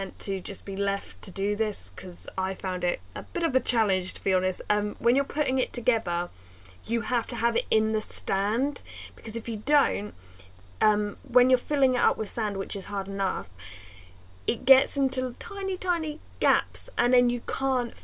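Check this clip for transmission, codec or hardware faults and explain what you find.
No transmission, codec or hardware faults can be heard anywhere in the clip. There is nothing here that needs a cause explained.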